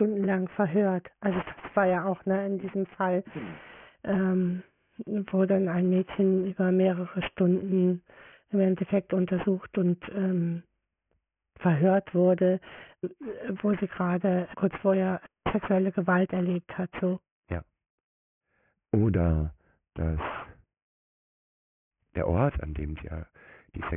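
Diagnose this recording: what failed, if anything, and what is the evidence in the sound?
Aliasing runs through the whole speech clip, from a sample-rate conversion stage. Sibilants sound gritty and metallic, and energy runs hard up to a 3 kHz edge, which fits a drop to 6 kHz with no anti-alias filter. Upper content folds back, roughly 20 dB below the speech.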